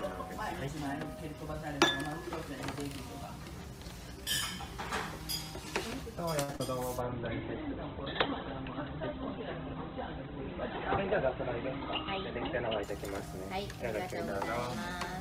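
Around 6.43 s there's a short stall from a late packet: a packet turned up late, the jitter buffer ran dry, and the receiver held the last bit of sound for about 50 ms until it arrived, then carried on from the same spot, so nothing's lost but the delay grows by 50 ms. Right behind it come two bits of short concealed packet loss, at 6.52 to 6.54 s and 6.56 to 6.60 s, with about 10 ms and 30 ms never reaching the decoder. The receiver papered over each gap by extending the preceding sound and blending back, which you hear as a brief smear. From 7.01 s to 12.89 s there's a call bitrate drop: the bandwidth estimate fell, and the encoder went from 48 kbps down to 10 kbps for about 5.8 s, with the audio bandwidth narrowing from 20 kHz to 4 kHz, so it sounds coarser and muffled until the rate comes back. Overlapping its tail, from 12.85 s to 13.50 s, there's a jitter buffer speed-up: with extra audio queued, the receiver trimmed out small pitch-period chunks, around 40 ms in all, so that stretch plays at 104% speed with the pitch unchanged.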